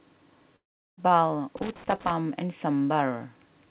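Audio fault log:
0.56–1.00 s, long network dropout: the speech cuts out, and the last sound hangs on briefly as a fading buzz before collapsing into near-silence for most of the gap. That's the receiver papering over packets that never showed up, likely a network dropout. When audio resumes at about 1.00 s, roughly 0.4 s of material is simply gone, not delayed. The dull, nothing-above-4 kHz tone around it is just the G.711 call path doing its normal thing.
1.57–2.11 s, loose connector crackle: an irregular burst of scratchy crackle lasting about half a second. It's what a worn or dirty contact sounds like when it shifts, making and breaking the connection so fast that the signal gets chopped into ragged fragments. The uneven, stuttering spacing is the tell. It points to something mechanical in the cabling rather than anything on the network side.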